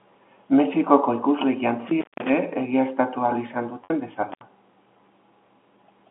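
The speech runs over a telephone-band line, roughly 200 Hz to 3.5 kHz, consistent with G.711 coding. At 1.88 s an intermittent contact sets in and lasts until 2.30 s. A loose connection opens the signal path for about 192 ms within that span. The speech drops out abruptly. Crackle marks the break and the reconnection. Faint hiss remains while the line is open.

At 3.84 s there is packet loss with pitch repetition, lasting 60 ms until 3.90 s. The receiver bridges the missing audio by repeating the last pitch period. That fills the gap with a brief held, buzzy tone. Because the gap outlasts the roughly 50 ms fade, the tone dies into silence. The speech then returns through a short cross-fade. The 60 ms gap fits six lost packets of 10 ms each.

At 4.32 s a second intermittent contact occurs, ending at 4.42 s. This time the line is open for about 74 ms. It is shorter than the first break but sounds the same way. 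There is a sudden cut with crackle at each edge and faint hiss underneath.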